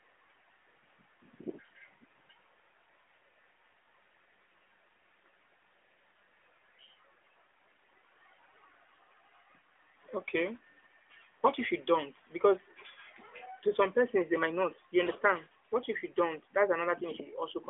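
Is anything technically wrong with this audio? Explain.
No, nothing stood out as a technical problem on listening.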